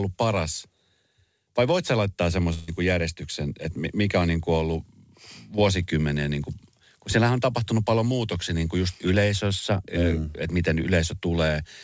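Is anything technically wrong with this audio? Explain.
Yes. From 2.54 to 2.70 s there is a burst of packet loss: about 140 ms of audio failed to reach the receiver in time, leaving the jitter buffer with nothing to play. The receiver filled the gap by stretching the last sound it had and fading it down over about 137 ms, then resumed further along. That stretch of speech is lost, replaced by a smeared, dying continuation before the speech jumps ahead over the G.722 call path, which carries nothing above 8 kHz.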